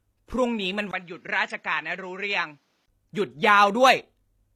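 Throughout the speech, the treble is likely rebuilt by HE-AAC compression rather than coded directly, at a rate that fits roughly 24 kbps. The copied upper bands don't match the real harmonics, so sibilants sound gritty and metallic, with plainly audible codec damage.

From 0.91 s to 2.88 s, the input likely switched to a poorer device, after a 20 ms silence at the switch. The narrower path cuts everything above 7.6 kHz, so the speech turns duller and a few decibels quieter, with a faint new noise floor underneath until the original input returns.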